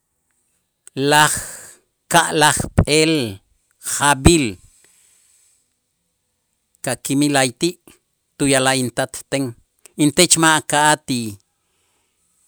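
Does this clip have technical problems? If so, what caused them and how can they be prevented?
No, there are no technical problems in this recording.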